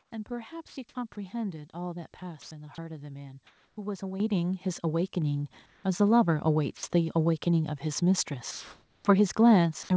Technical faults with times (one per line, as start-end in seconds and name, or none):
0.00-0.11 comfort noise in place of the background
0.68-1.16 sound chopped by the voice detector
2.42-2.78 sound chopped by the voice detector
3.47-3.77 comfort noise in place of the background
4.20 microphone volume stepped up
5.66-5.84 comfort noise in place of the background
6.77-6.83 sound dropped by the voice detector
8.51-9.05 comfort noise in place of the background